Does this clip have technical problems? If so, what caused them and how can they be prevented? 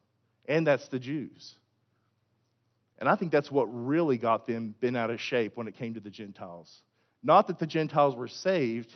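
No, nothing here counts as a technical problem: the faint room noise sits about 53 dB below the speech, and the call codec's top end rolls off around 12 kHz, which is just how a call link like this normally sounds.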